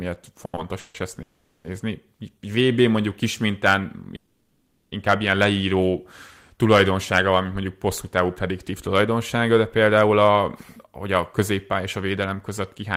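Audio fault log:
0.45 to 0.55 s and 0.55 to 0.59 s, short stall from a late packet: the speech holds its last sound for 80 ms and then 20 ms, with a faint buzz, before carrying on. Nothing is skipped, and the holds are too brief to become a fading freeze.
0.79 to 0.96 s, 1.22 to 1.66 s and 4.16 to 4.94 s, call audio freeze: the sound stretches into a fading buzz for 150 ms, 420 ms and 760 ms, the last between "mondjuk kis mintán" and "ilyen leíró tulajdonsága van". It never drops to silence and resumes without loss, likely from packets delayed in transit. This is longer than a stall.
10.78 to 12.96 s, jitter buffer speed-up: after "tulajdonsága de például a", the speech runs about 7% fast at unchanged pitch as small pitch-period slices, around 150 ms in total, are cut to shrink the built-up delay. It sounds hurried rather than held or gapped.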